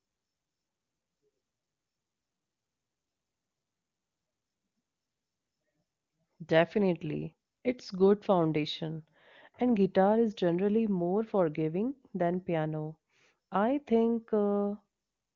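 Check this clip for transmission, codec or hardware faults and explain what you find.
Nothing here points to a transmission, codec or hardware problem; the speech comes through the AMR wideband (HD Voice) codec at its top rate of 23.85 kbit/s, where any coding damage is faint at most.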